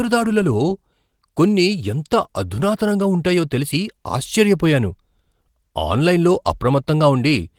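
No technical faults can be heard in this speech.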